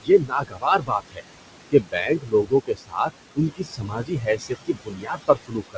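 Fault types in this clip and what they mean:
Noise suppressor artifacts: steady background is pushed down by about 20 dB frame by frame, so gaps look dark on a spectrogram while residual noise rises under speech.
Speech cut by the noise suppressor: quiet speech treated as noise drops by up to about 21 dB across 0.01–1.22 s, 1.7–3.11 s and 3.35–5.77 s, showing as notched, thinned waveform envelopes.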